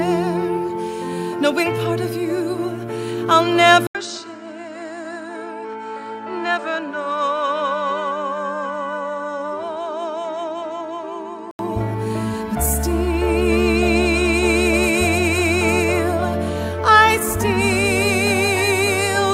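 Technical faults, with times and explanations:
3.87 to 11.59 s, input switched to a poorer device: the sound drops out for 80 ms, then returns about 10 dB quieter and duller, with nothing above 8.9 kHz and a new, faint noise floor well below the signal, until it clears again at 11.59 s. The likely cause is the recording moving to a narrower-band microphone and back. A spectrogram shows a flat ceiling at 8.9 kHz across that span; the waveform shows a brief gap and a shrunken envelope.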